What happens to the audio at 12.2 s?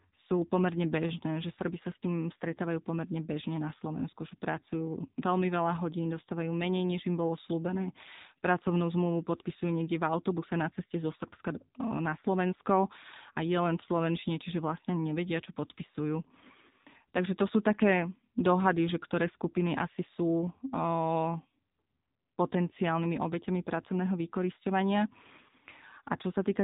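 At 12.2 s you're hearing the AMR narrowband mobile codec, which runs through the whole clip. Speech is rebuilt from a vocal-tract model fed by sparse pulses, so it sounds buzzy and synthetic, which fits a low rate around 7.4 kbps, with nothing above 3.8 kHz.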